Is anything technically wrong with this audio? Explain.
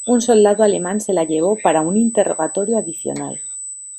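Yes. Throughout the speech a thin, steady whine sits at a fixed 8 kHz, only around 10 dB below the voice. This is USB whine: current drawn in 125-microsecond bus microframes leaks through power or ground into the audio path.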